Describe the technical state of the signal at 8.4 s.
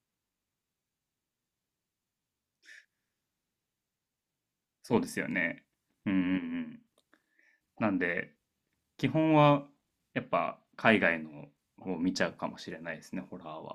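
At 8.4 s the speech signal is intact, with no dropout, clipping, distortion or other fault audible at that moment.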